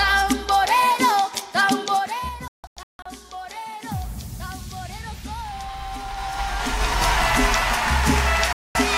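A ticking, zipping texture rides on the audio from 1.84 to 2.37 s as the level drops about 15 dB. This is zipper noise: the gain moves in unsmoothed 3 dB steps, roughly ten per second. The sound then breaks into scattered holes from 2.48 to 3.06 s, and cuts out again from 8.53 to 8.76 s. These are digital broadcast dropouts, where the receiver muted on lost or corrupted frames: about 448 ms missing over the first span, longest gap 160 ms, and 224 ms in the second.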